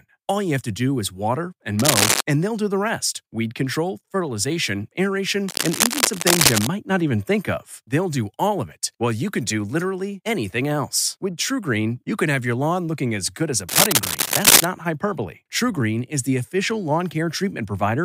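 Three bursts of cable scratch noise turn up: 1.79 to 2.21 s after "do is water and", 5.46 to 6.67 s after "rest weed control fertilization", and 13.69 to 14.67 s after "as good as a". Each is a rough, uneven crackle riding at or above the speech level, likely from a worn cable or connector being moved.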